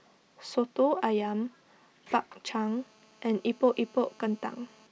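A speech recording with GSM phone buzz from about 2.68 s to 4.87 s: a hard, raspy tone near 217 Hz that has nothing to do with the speech, sitting about 32 dB below it and holding steady, as a 2G handset in a call keeps transmitting. The audio circuit rectifies each radio burst into a click. On a spectrogram this shows as a comb of evenly spaced lines at 217 Hz and its harmonics, and on a zoomed waveform as a regular pulse train.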